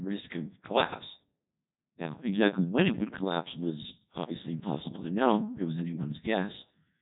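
From start to finish the speech has passed through a Codec 2 vocoder, run hard enough to suggest roughly the 1.2 kbit/s mode. Only pitch, voicing, energy and a coarse spectral envelope survived, and the decoder rebuilt everything from sine waves, so the original waveform is gone. The result is heavily damaged: speech comes out robotic and buzzy, with a synthetic, smeared quality, and nothing is left above 3.8 kHz.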